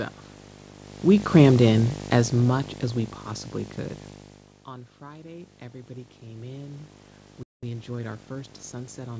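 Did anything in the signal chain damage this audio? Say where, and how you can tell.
Yes. There are five faults.

Video or display buzz runs through the whole clip. It is an analogue wiring fault. A 50 Hz buzz, matching the picture's field rate, sits about 10 dB below the speech, with a hash of harmonics above it. A screen or video cable is coupling into the audio lines.

Automatic gain falling happens from 1.06 to 3.28 s, in the call processing stage. Just after the talker moves, at about 1.0 s, the gain slides down by 12 dB. The speech and the room noise sink together. That shared drop shows the level control acted on everything at once.

Automatic gain rising runs from 4.69 to 6.95 s. The input drops about 17 dB after the talker moves, at about 4.0 s. The gain control then slowly lifts by 7 dB. Voice and background swell together over roughly two seconds. That swell is the gain stage chasing the quieter input.

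A playback stall hits at 7.43 s. The audio cuts out mid-flow for 0.19 s and then resumes. The likely cause is the player's buffer running dry or its thread being blocked at the playback stage.

A time-compressed catch-up follows from 7.63 to 9.09 s. The speech runs 1.1 times faster but keeps its normal pitch. The player is cutting small pieces out and cross-fading the joins to clear the backlog left by the stall.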